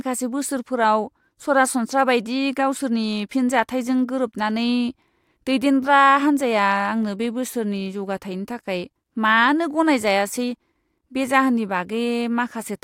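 At 7.03 s the speech carries a single sharp click, a brief broadband tick that shows as a thin vertical line across the spectrum. This is most likely dropped samples: a handful of samples, well under a millisecond's worth, appear to be missing from the stream, so the waveform jumps abruptly from one value to a later one. The gap is far too short to remove any audible sound, so the discontinuity itself is all that is heard.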